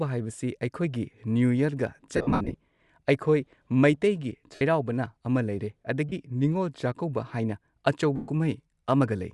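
All the way through, the speech has a breathy, grainy edge on top, most likely Bluetooth LC3 compression around 48 kbps, with the upper band thinned and filled with noise. Lost LE Audio frames cause dropouts at 2.16 to 2.54 s (about 240 ms gone, scattered, longest stretch around 70 ms), then 4.55 to 4.61 s, 6.09 to 6.12 s and 8.16 to 8.28 s. The decoder smears the last spectrum into noisy mush there.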